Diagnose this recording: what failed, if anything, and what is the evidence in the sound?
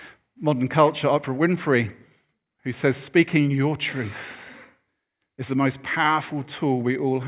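Nothing failed: there is no evidence in the sound of any fault at any stage of the recording chain.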